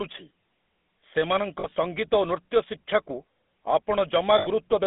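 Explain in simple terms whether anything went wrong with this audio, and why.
Two things went wrong with this speech. The first runs through the whole clip. It was sent through the GSM full-rate codec, the voice coder used by early mobile phones. It rebuilds the voice from a simple model driven by evenly spaced pulses. That leaves a buzzy, gravelly roughness you can plainly hear. Only sound from about 200 Hz to 3.6 kHz gets through, so the voice sounds thin and muffled, like an old phone call.

The second problem is lost GSM frames. A frame is a tiny slice of the sound. When one goes missing, the decoder fills the hole by repeating the last good slice. That repetition turns into a brief metallic, ringing smear. It happens between 1.6 and 1.77 s, as short dropouts spread across that stretch, and again from 4.38 to 4.47 s.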